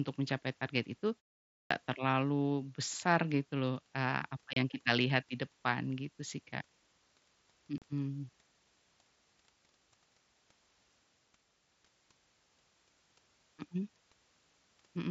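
At 1.54 s, after a pause of 0.41 s, the speech returns with a clipped start after a pause. The output device had gone idle and needed time to wake. About 165 ms is swallowed, to 1.71 s. The sound begins abruptly, missing its onset.

Unconcealed Bluetooth headset packet loss follows at 4.53 s and 7.78 s. The gaps last 30 ms and 37.5 ms. That fits several lost 7.5 ms headset frames each time. Nothing fills them. The speech carried over the mSBC link has short holes with hard, abrupt edges.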